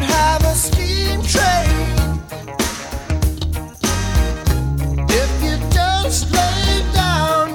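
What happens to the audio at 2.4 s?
Nothing goes wrong at 2.4 s: the audio plays through intact there, with no dropout, click or other fault.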